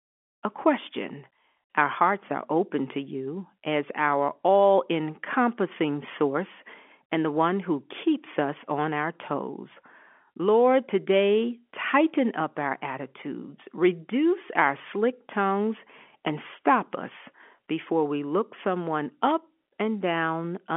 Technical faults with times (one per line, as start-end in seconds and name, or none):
none